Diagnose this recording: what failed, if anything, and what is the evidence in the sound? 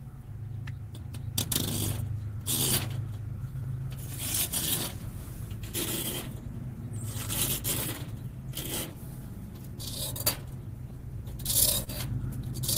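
Clock drift between sender and receiver is the underlying failure, at the network and jitter-buffer stage. The sender's clock runs slow, by roughly 2 percent against the receiver. Audio arrives a little slower than it is played out, so the buffer keeps draining. The receiver must keep making up the shortfall. That pressure is present across the whole recording. The sound carries small, recurring timing hiccups at uneven intervals.

Repeated timing corrections are the direct evidence. They run from 0.04 s to 11.37 s. The receiver repeats short pieces to stay in step with the slow sender, and the effective rate sits at 99 percent. All the edits go the same way. Together they add roughly 150 ms to the sound. Each one is small.

Scattered short gaps appear late, between 10.37 s and 11.89 s, at the network stage. About four packets arrived late or not at all. The receiver filled each hole by continuing the last sound. 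The patches total around 50 ms, and the longest gap is about 30 ms. Only a few percent of that stretch is concealed. The result is brief ticks and smears, not silences.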